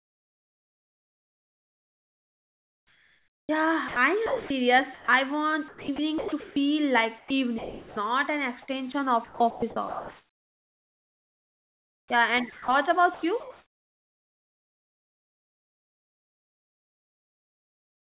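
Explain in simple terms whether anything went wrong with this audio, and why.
Parts of the speech drop out and get swapped for a soft hiss. This is sound chopped by the voice detector. It happens from the start to 5.08 s, from 5.68 to 6.56 s, from 7.18 to 7.96 s (just before "an extension of"), and from 9.24 s to the end. The sender's system likely judged quiet moments as silence and stopped sending them. Fake background noise filled those gaps, almost 4 seconds early on and about 7.5 seconds near the end. So the speech sounds choppy. The call line itself carries nothing above 4 kHz.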